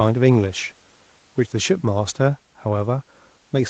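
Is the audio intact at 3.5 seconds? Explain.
Yes, at 3.5 seconds the speech plays through intact, with no dropout, glitch or other fault at that moment.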